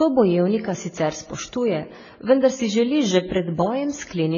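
Throughout the clip the speech sounds dull and muddied, with nothing above 7 kHz and several layers of codec damage smeared together. The likely cause is transcoding between lossy codecs: a very low-rate AAC-style encode, re-encoded to MP3 and then WMA, each adding its own artefacts.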